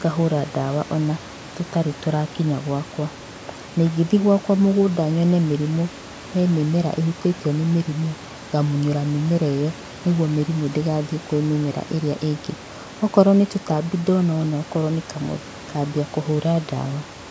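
Nothing technical goes wrong in this speech recording: it has the usual call microphone processing, with nothing above 8 kHz and the lowest bass trimmed away, and some room noise sitting about 20 dB below the speech.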